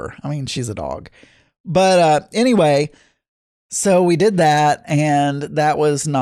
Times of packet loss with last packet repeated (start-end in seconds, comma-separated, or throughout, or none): none